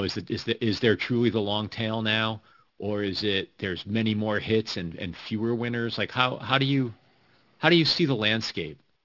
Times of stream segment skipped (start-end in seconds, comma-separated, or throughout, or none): none